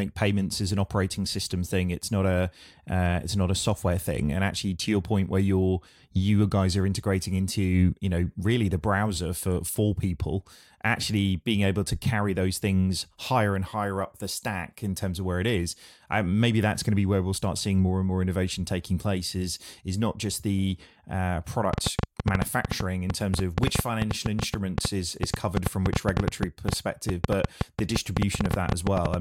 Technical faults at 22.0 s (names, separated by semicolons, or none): train of clicks